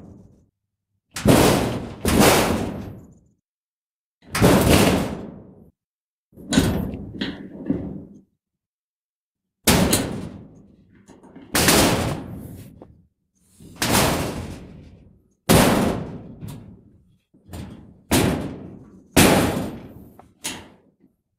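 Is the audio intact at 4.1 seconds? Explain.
Yes, the audio is intact at 4.1 seconds, with no dropout, distortion or other fault at that point.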